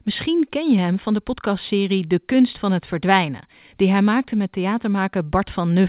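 Speech carried over a telephone-style call path with nothing audible above 4 kHz, consistent with narrowband G.711 A-law coding at 64 kbps, and no technical faults are heard anywhere in it.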